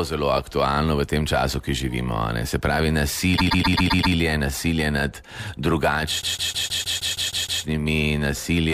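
At 3.36 s the sound starts stuttering: a chunk of about 131 ms plays again six more times, lasting until 4.14 s and adding about 0.78 s. That's repeated frames, where a short run of compressed frames got written or sent more than once, so the decoder plays the same slice again. It happens once more from 6.21 s to 7.62 s, where a slightly longer block of about 157 ms loops nine extra times and adds about 1.41 s.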